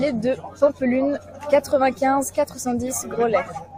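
At 3.46 to 3.49 s, compressed frames are skipped: roughly five frames of about 42.7 ms each never play, so the speech jumps ahead by around a fifth of a second. Unlike a dropout, there is no silent gap; the speech simply jumps ahead at the join.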